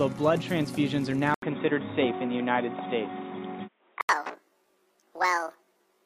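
A stretch of audio from 1.34 s to 4.09 s turns dull and boxy, with nothing above 3.8 kHz, a short 80 ms gap where it begins, a shift of a few decibels in level and a faint new noise floor far below the signal. The likely cause is an input switched to a poorer device. On a spectrogram the upper band empties abruptly across that span, framed by a thin blank column at the switch. The waveform shows a step in amplitude there.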